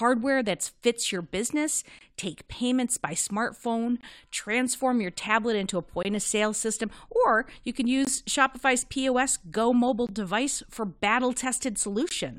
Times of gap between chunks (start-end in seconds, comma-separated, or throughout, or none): 1.99-2.01, 6.03-6.05, 8.05-8.07, 10.07, 12.09